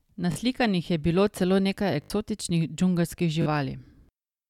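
Speech in which playback audio arrived late three times, so the device repeated a buffer: a stutter with hard joins at 0.32–0.36, 2.02–2.10 and 3.42–3.46 s, consistent with 20 ms buffers.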